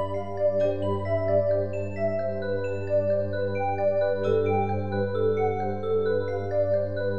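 No technical faults can be heard anywhere in the clip.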